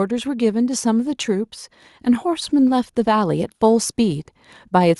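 From 0.08 to 1.57 s, then 2.23 to 4.95 s, automatic gain rising lifts the level by about 3 dB and then about 5 dB, judging the input too quiet. Unlike a deliberate fade, the background noise swells with the speech.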